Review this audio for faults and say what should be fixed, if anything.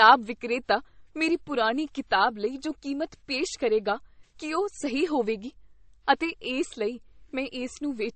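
Transcoding between lossy codecs runs through the whole speech clip. Nothing is present above 8.4 kHz, so the top end is dull throughout. The texture carries two layers of artefacts at once, the artefacts of each codec heard together. That pairing likely comes from a low-rate MP3 pass, around 32 kbit/s, later re-encoded to WMA. The second codec wasted bits copying the first one's damage and kept its low cut-off. To prevent this, encode once, directly from the original uncompressed source.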